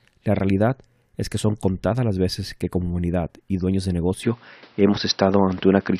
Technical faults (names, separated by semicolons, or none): input switched to a poorer device